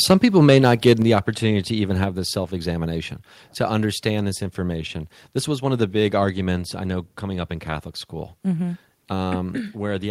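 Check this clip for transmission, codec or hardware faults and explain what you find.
Two hardware-side faults are audible in this speech clip, both near the start.

From 0.10 to 0.13 s and again from 0.48 to 0.92 s, the loudest syllables take on a harsh, crackling edge with flattened peaks, about 2 dB and then about 4 dB past full scale, with a few percent of samples cut off. This is likely microphone overload: input gain set so high that the converter's ceiling clipped the waveform tops.

At 1.02 s, just before "opportunity to even", speech and background together fall abruptly by about 4 dB and stay lower. This is likely the microphone volume stepped down, with the call software reacting to the preceding clipped peaks by cutting the device's input level in one step.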